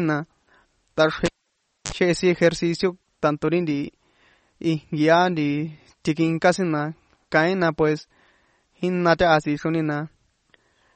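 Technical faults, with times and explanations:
Throughout: MP3 compression, likely the cause of the watery, swirling coloration plainly audible in the speech, with nothing above 8.4 kHz. The sound points to a low bitrate near 34 kbps, where the encoder drops weak frequency lines frame by frame, smearing consonant attacks.
1.26 to 1.92 s: cable pulled and plugged in. A pop cuts the speech to near silence for about 0.62 s, including a 45 ms burst of 50 Hz mains buzz as the bare tip touches, then a second pop as sound returns just before "chehe sin".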